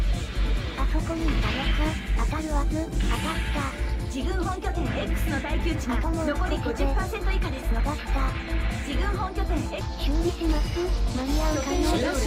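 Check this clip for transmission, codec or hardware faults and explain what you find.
Nothing stood out on listening to this clip.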